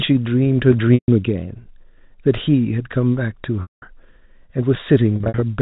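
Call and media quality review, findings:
Held, buzzy tone fading to near-silence at 0.94–1.08 s and 3.62–3.82 s, with short buzzy stutters scattered across 5.16–5.42 s (longest 60 ms). Cause is packet loss with pitch repetition: receiver concealment loops the last pitch period, fades it over about 50 ms, then cross-fades back. Gap lengths fit 20 ms packets.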